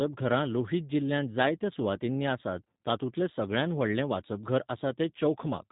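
Speech with plainly audible G.729 codec damage throughout. Nothing passes above 3.8 kHz. Pulse-built excitation makes it rough and synthetic, which fits 8 kbit/s.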